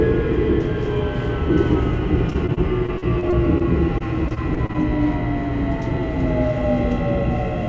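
From 2.30 to 3.62 s the sound turns choppy, with short pieces dropping out, about 180 ms missing in all, the longest hole about 40 ms. It steadies briefly, then breaks up the same way from 3.98 to 4.76 s. This is repeated packet loss (robotic sound): audio kept arriving late or not at all, and each hole was patched by stretching the last sound, giving the robotic texture. The call path itself, whose cut above 8 kHz fits a wideband codec like G.722, isn't at fault.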